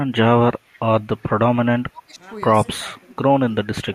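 Echo leak at 0.69 to 0.80 s: a very faint copy of the speech returns 314 ms late, likely loudspeaker pickup that an echo canceller failed to remove. Speech suppressed in double talk at 1.82 to 2.23 s, 2.73 to 3.12 s and 3.48 s to the end: the speech dips sharply, by roughly 20 to 30 dB. The likely cause is an echo canceller turning down both sides while they overlap.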